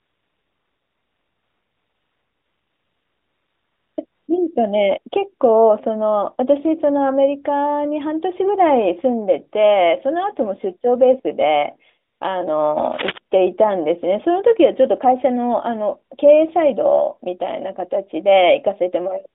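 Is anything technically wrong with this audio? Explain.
Yes, there are two faults in this narrowband mobile speech, which is band-limited to roughly 250 Hz to 3.7 kHz with light codec colouring consistent with AMR-NB at 12.2 kbps.

AMR comfort noise runs from 0.0 to 3.98 s, from 4.06 to 4.28 s, and from 12.12 to 12.2 s. During these gaps no speech frames arrive, and the receiver generates a smooth, steady synthetic hiss from a rough level and spectrum estimate. It audibly switches on and off against the real background.

Cable scratch noise appears from 12.77 to 13.18 s as a dense, irregular burst of rustling at about 10 dB below the speech. It likely comes from a worn cable or connector being moved, with its fluctuating contact resistance briefly adding scratchy noise.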